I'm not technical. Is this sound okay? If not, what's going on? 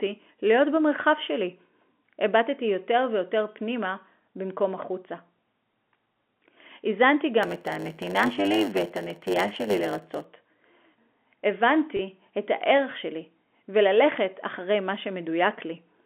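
No. From 7.42 to 10.25 s the speech takes on a steady buzz, about a hundred pulses a second, and runs slightly slow, roughly 8% behind normal. This is a block size mismatch (padded): one step in the chain hands over smaller chunks of sound than the next step expects, and the leftover space in each chunk is filled with silence. Those tiny gaps, repeating a hundred times a second, make the buzz and stretch the timing.

At 11.97 to 11.99 s there's a very brief catch where the sound seems to hang for an instant with a faint buzzy edge. That is packet loss with pitch repetition: about 20 ms of audio went missing in transit, and the receiving end covered the hole by repeating the last bit of the speech. The gap was short, so you hear a small held moment rather than silence. Throughout, the speech has the narrow, telephone-like sound of an ordinary phone line.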